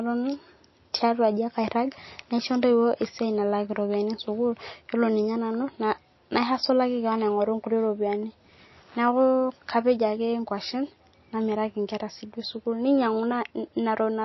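Right through the clip the speech sounds dull and watery, with nothing above 5.8 kHz and swirly chirps on the s sounds. That's likely MP3 compression starved of bits, which fits roughly 27 kbps: the encoder chops the treble, and weak frequency lines flicker frame to frame.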